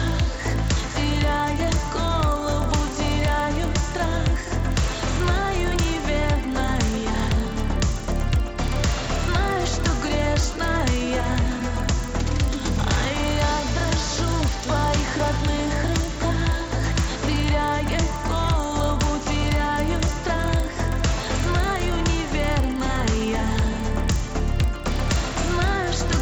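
Throughout, the resampler restarted on every block. Each 40 ms block was converted from 16 kHz to 48 kHz in isolation, so its edges lack neighbouring samples and carry a small error. The result is a steady 25 Hz ticking that follows the sound and stops in silence.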